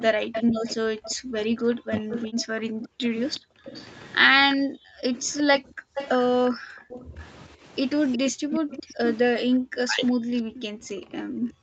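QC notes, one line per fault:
0.00–1.14 s and 2.11–9.18 s, echo leak: A faint delayed copy of the speech trails the talker by 363 ms, at about 15 dB below it. The likely cause is a loudspeaker on the far side whose echo canceller let some of its microphone pickup through and sent it back.
0.11–7.16 s and 8.32–11.62 s, background gated by the echo canceller: The room sound drops away in bursts, by up to about 40 dB, then returns. In the first stretch this adds up to roughly three seconds. The canceller clamps the microphone hard while its loudspeaker plays, so the background vanishes.
1.81–2.14 s and 8.86–10.03 s, speech suppressed in double talk: The talker's voice dips sharply, by roughly 40 dB at worst, for about 0.3 s in each span. Both sides likely spoke at once, and the canceller could not tell the voice from the echo, so it turned both down.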